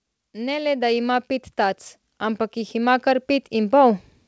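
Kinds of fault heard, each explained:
Automatic gain rising: the speech and the background behind it swell together, climbing steadily louder from 0.32 s to 4.09 s, by about 11 dB overall. The automatic gain control judged the input too quiet and kept raising its gain gradually.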